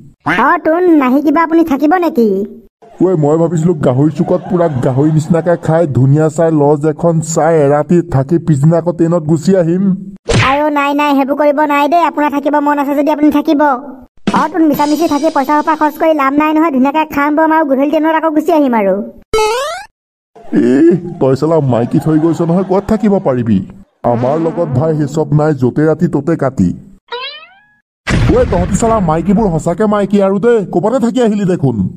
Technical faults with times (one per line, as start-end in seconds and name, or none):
none